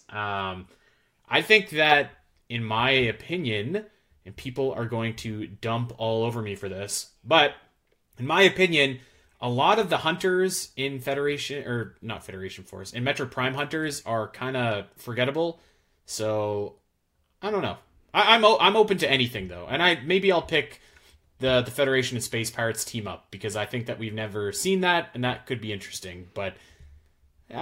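A speech recording, and there is nothing technically wrong to report. Listening through it turns up no fault at any point.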